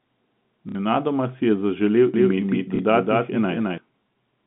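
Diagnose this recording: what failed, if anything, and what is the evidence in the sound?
Network stage: packet loss with last packet repeated. At 0.69 s a 60 ms gap is filled by replaying the last packet. At 2.76 s a 30 ms gap is filled the same way. The lengths fit 30 ms packets, two lost in the first event and one in the second. The first run buzzes at about 33 Hz, a brief robotic stutter.

Capture or mixing stage: doubled audio track. Right after "si je zaželel", at 2.14 s, a second full-band copy appears. It runs until 3.78 s, trailing the original by roughly a fifth of a second. The copy is about as loud as the original. It has no decay or room colour, and it starts and stops abruptly. The likely cause is a second, slower capture path mixed back in. Both copies share the same narrow telephone band.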